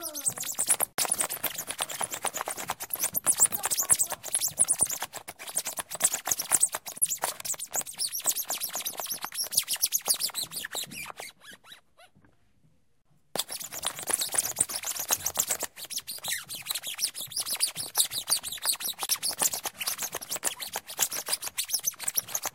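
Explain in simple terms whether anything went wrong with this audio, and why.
Yes. Brief silences at 0.93 s (52 ms), 6.98, 13.02 and 19.06 s (37 ms each) are gaps at a join of encoded pieces: separately encoded chunks kept their padding. Unlike a dropout, the sound resumes exactly where it stopped.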